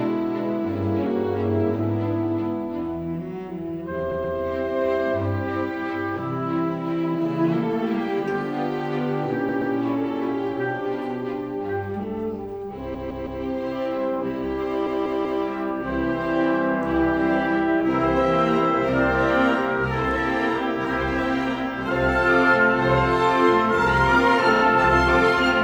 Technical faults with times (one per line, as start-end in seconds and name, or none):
4.11-4.37 repeated frames
9.49-9.74 repeated frames
12.94-13.42 repeated frames
14.86-15.44 repeated frames
24.56-24.62 repeated frames